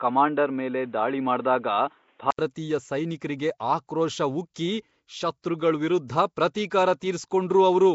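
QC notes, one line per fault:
throughout: Nellymoser compression, likely the cause of the rough, hissy halo and smeared, underwater feel. Each short block gets a fixed bit budget, so weak bands are swapped for noise. The damage is plainly audible, nothing survives above 7.7 kHz, and it fits a 32 kbps stream.
0.00–2.39 s: input switched to a poorer device, likely the cause of the dull, boxy opening. Nothing reaches above 3.8 kHz, with its own background noise some 40 dB down. At 2.39 s there's an 80 ms gap, then the band opens up and the level moves by around 5 dB.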